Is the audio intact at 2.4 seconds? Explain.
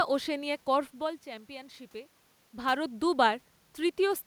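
Yes, the audio is intact at 2.4 seconds, with no fault from the system at that moment.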